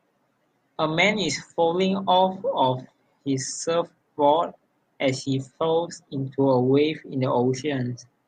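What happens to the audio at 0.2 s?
Nothing goes wrong at 0.2 s; the speech is intact at that moment, with no dropout, click or distortion.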